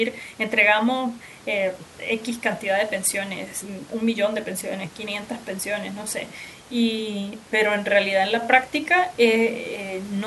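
Nothing stood out on listening to this speech clip, apart from a faint room noise sitting about 26 dB below the voice.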